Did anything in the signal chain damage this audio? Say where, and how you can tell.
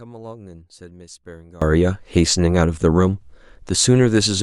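Yes. From 0 to 1.62 s the speech in the mono sum falls by about 24 dB to a faint residue, the mark of one channel inverted, likely from a polarity-reversed lead in the analogue wiring. The waveform envelope collapses there.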